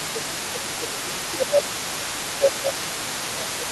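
From 0.0 to 3.72 s the other side's voice leaks through underneath the speech, sitting roughly 15 dB below it. This is likely loudspeaker playback that reached the microphone and was only partly removed by the echo canceller.

Across the same span, 0.0 to 3.72 s, the speech is suppressed in double talk: the talker's level dips by as much as about 15 dB while the second voice is present. The likely cause is the echo canceller failing to separate the talker from the echo and attenuating both.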